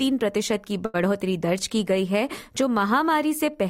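A short stall from a late packet occurs at 0.85 to 0.96 s. A packet arrived late, the jitter buffer emptied, and the receiver stretched the last sound for about 86 ms before resuming where it left off, so nothing is lost but the sound is held, with a faint buzz or dip.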